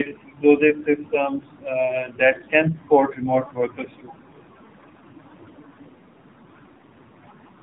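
From start to finish the speech carries tandem speech coding: it passed through two low-rate speech coders in succession, with a decode and re-encode between them, so the second coder worked on sound the first had already degraded. The signal stops at about 3.8 kHz, and the roughness, muffling and warbling are heavier than any single coder produces. That compounding is what separates this from one narrowband codec. The character fits an iLBC stage feeding an AMR-NB stage near 7.95 kbit/s.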